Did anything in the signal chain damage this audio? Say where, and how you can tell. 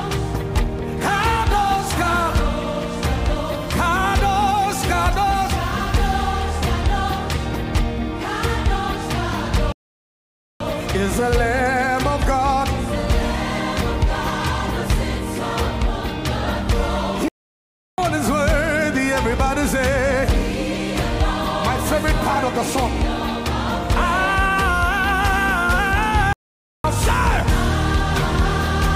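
Yes. The sound cuts to silence three times in mid-flow and then resumes: from 9.72 to 10.60 s (0.88 s), from 17.28 to 17.98 s (0.70 s), and from 26.33 to 26.84 s (0.51 s). These are playback stalls at the playback stage. The drop-outs suggest the player most likely ran out of buffered data or had its output thread blocked, going silent until it recovered.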